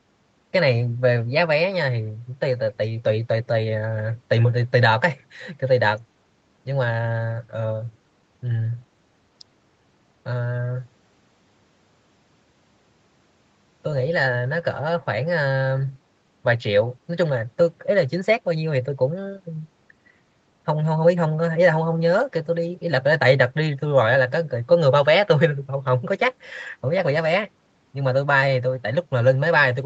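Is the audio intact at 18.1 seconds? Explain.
Yes, at 18.1 seconds the speech is intact, with no fault at that moment.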